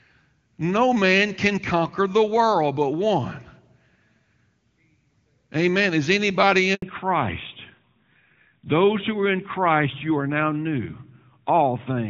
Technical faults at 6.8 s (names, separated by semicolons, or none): handover gap; fallback to narrowband